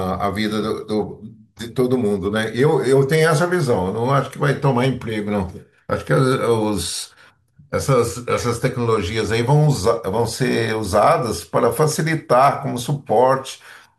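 A speech recording with no technical faults to report: the signal runs without interruption or audible defects.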